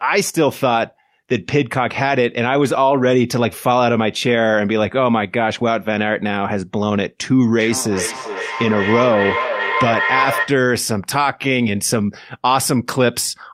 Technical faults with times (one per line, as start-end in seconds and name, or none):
7.57-10.70 feedback echo between two devices